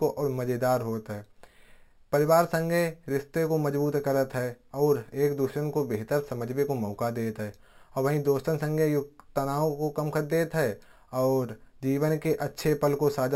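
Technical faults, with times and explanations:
Throughout, imaging from sample-and-hold upsampling: the speech was raised to a higher rate by simply repeating each sample with no smoothing filter, so mirrored copies of the spectrum sit above the original band. The lowest copy fills roughly 6 to 12 kHz, about 22 dB under the speech, which fits a 12 kHz source taken to 48 kHz. It comes across as a bright, metallic fizz that rises and falls with the speech.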